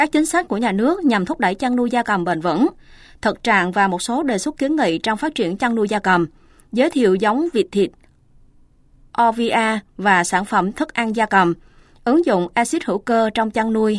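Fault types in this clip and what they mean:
No faults are audible.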